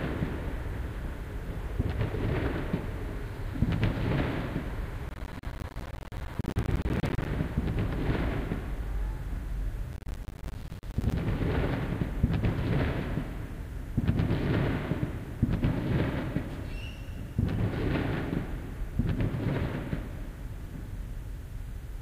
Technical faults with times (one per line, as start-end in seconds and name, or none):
5.09-7.26 processor overload crackle
9.93-11.13 processor overload crackle